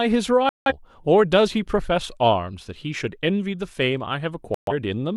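Speech with two digital broadcast dropouts, at 0.49–0.72 s and 4.54–4.73 s, where the receiver mutes after losing valid frames, leaving silent holes and discarding that audio.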